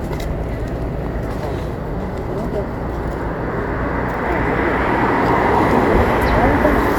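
No technical faults are audible anywhere in this audio.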